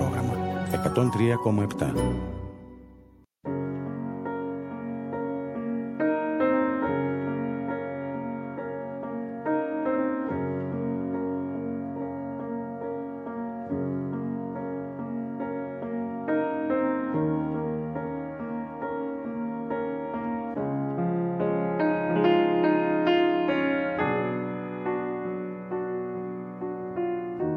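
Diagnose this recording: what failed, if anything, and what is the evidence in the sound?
Nothing failed: no stage from capture to playback leaves any audible evidence of a fault anywhere in the recording.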